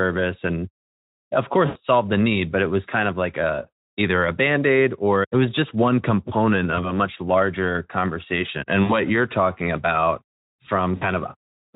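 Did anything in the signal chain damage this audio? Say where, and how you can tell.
Yes. VoIP packet loss concealed by the speech codec at the network stage: at 1.65–1.78 s before "it solved the need", 6.75–6.92 s, 8.83–8.93 s before "you're talking about", and 10.96–11.03 s the Speex decoder stretches its last pitch and filter into a fading buzzy tone or coloured noise, with the speech staying weak briefly after each gap.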